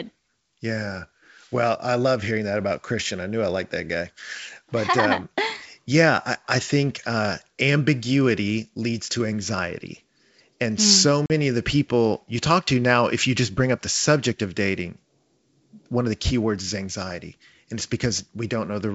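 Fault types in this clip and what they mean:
Packet loss on an ADPCM call: Right after "mm so", at about 11.26 s, the sound drops into a hard-edged silent gap lasting about 40 ms before resuming on "of the people you". As it comes back it is slightly distorted, and it settles within a few tens of milliseconds. A couple of packets, about 40 ms of audio, went missing. The decoder's adaptive predictor and step size then had to resynchronise with the sender's.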